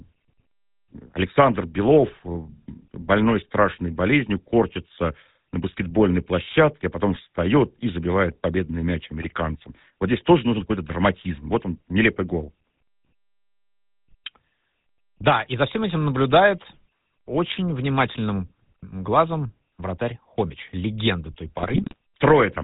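Speech with a buzzy, gravelly roughness throughout and no content above 4 kHz, which leaves the voice dull and rasping. This is the GSM full-rate codec, which fits the 13 kbps first-generation GSM coder. It models the vocal tract as a filter driven by a regular pulse train and keeps only a decimated excitation, so the fine detail of the voice is replaced by that coarse, grainy buzz. At 9.20 to 9.25 s, and again from 21.58 to 21.95 s, the voice breaks into squawks, pops and gargling. These are GSM bit errors. Flipped bits reached the decoder and corrupted its filter, pitch and gain values, which bent the spectrum and made the level jump for each damaged frame. The brief first burst points to a couple of corrupted frames, and the longer second one to a much larger run of them.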